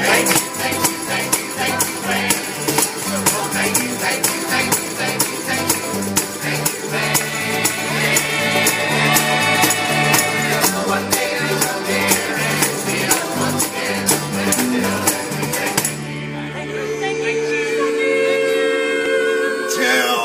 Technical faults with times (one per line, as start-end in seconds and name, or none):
1.07-19.06 clock drift buffer slips